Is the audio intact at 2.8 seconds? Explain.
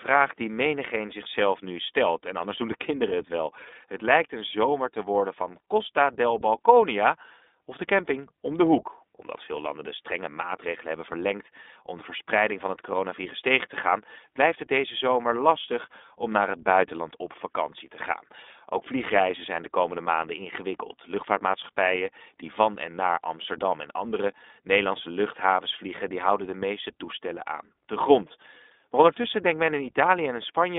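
No. iLBC codec damage runs through the whole clip, 2.8 seconds included. Each 20 ms frame's excitation is coded independently, so the speech sounds plainly rough and synthetic. The band is narrowed to roughly 250 Hz to 3.6 kHz, with nothing above 3.8 kHz.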